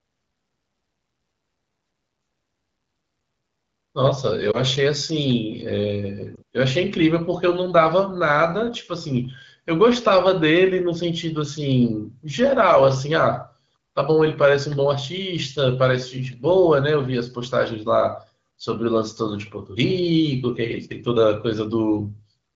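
At 4.51 s and again at 6.36 s, the speech briefly dips and warbles. These are lost AMR speech frames. Radio errors corrupted the data, so the decoder filled the gap. It repeated the last good pitch and vocal tract settings at a lower gain. Each gap sounds like a single missing 20 ms frame. The voice recovers quickly, weak for a moment. Around both events, the AMR wideband (HD Voice) coding sounds clear.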